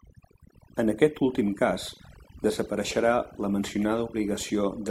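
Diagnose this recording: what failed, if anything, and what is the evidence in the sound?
Overdone noise removal in call processing runs throughout: near-silent gaps with twinkling specks; the spectrogram shows patchy, holed bands where quiet detail was gated away.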